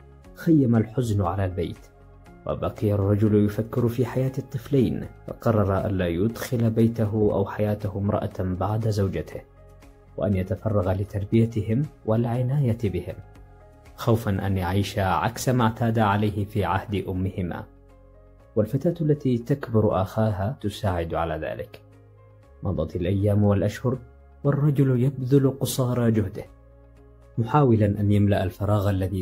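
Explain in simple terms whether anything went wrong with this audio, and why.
Nothing went wrong here; I listened closely and there's no glitch, dropout or other technical problem anywhere in the recording.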